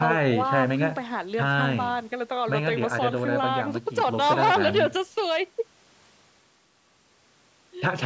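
No faults found in this speech; the call microphone processing trims the lowest bass with its high-pass filter and leaves nothing above 8 kHz, which fits a 16 kHz sample rate and is normal for that path.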